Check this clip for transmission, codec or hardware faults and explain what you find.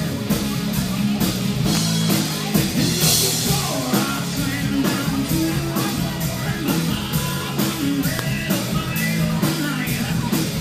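Two sharp snaps sit on top of the sound, at 1.75 to 1.78 s and at 8.19 s. These are electrical switching spikes, likely from a nearby switch, motor or static discharge arcing briefly and being picked up by the audio line.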